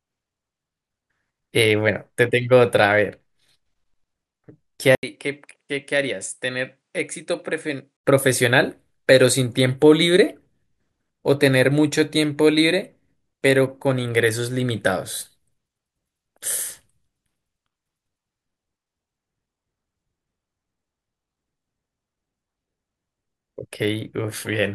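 At 4.95 s an 80 ms gap opens. Until 8.05 s the speech drops by roughly 10 dB, loses everything above 10.8 kHz and carries a faint new noise floor, likely an input switched to a poorer device before returning to the original.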